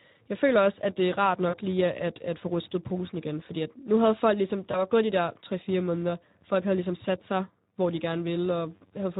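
From the start, a filter restarted on every block resets its state at each boundary, adding a buzz near 93.8 Hz that fits a 512-sample block and rises and falls with level. Throughout, the Speex codec, at a setting that sounds consistent with roughly 11 kbps, lacks bits for the excitation, leaving the speech audibly hoarse and noisy. From 1.50 to 1.59 s, after "at det er rart" and before "lige at at få", VoIP packet loss concealed by the speech codec stretches about 40 ms into a fading buzzy tone or coloured noise. At 4.71 to 4.87 s, after "nu havde folk ligesom", a shorter 20 ms loss is similarly extrapolated, leaving the following sound weak and smeared.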